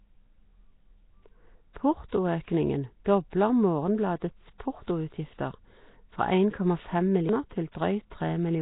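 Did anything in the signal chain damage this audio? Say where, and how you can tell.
Yes. Throughout, the speech carries heavy codec damage: a rough, hissy halo and smeared, underwater quality, with nothing above 3.9 kHz. On a spectrogram, a hard ceiling at 3.9 kHz and noisy fill in weak bands. Likely Nellymoser compression, consistent with a 16 kbps stream.

At 7.29 s, a playback-stage CD skip: a tick with a mute of only a couple of milliseconds, then the audio resumes elsewhere on the disc's spiral. The waveform shows a tiny gap and an abrupt discontinuity.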